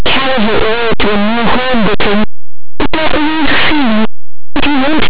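Throughout, linear audio read as companded: plain 8-bit samples decoded as mu-law turn values just on one side of zero into the largest outputs, a harsh roar rather than mere 8-bit graininess.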